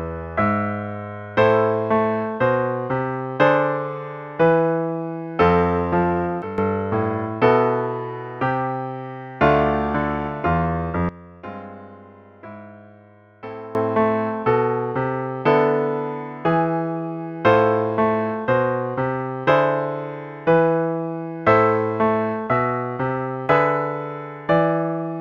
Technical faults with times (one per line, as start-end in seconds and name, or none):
6.42-6.58 sudden gain jump
11.09-13.75 sudden gain jump